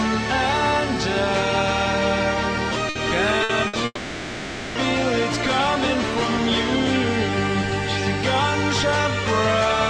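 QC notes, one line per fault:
2.89–2.98 s, 3.43–3.52 s, 3.67–3.76 s: burst of packet loss. At each point about 60 ms of audio is skipped, and the receiver fills the gap by continuing the last sound as a fading buzz or hiss. On a spectrogram this shows as smeared, frozen bands that dim before the sound abruptly resumes.
3.85–4.78 s: long network dropout. The sound freezes into a continued buzz or hiss that fades over about 900 ms, leaving roughly 30 ms of silence before the audio returns with that stretch missing. This is likely caused by a network stall in which no packets arrived. The waveform shows a decaying envelope that drops to a flat line. The spectrogram shows static, blurred energy that fades to blank.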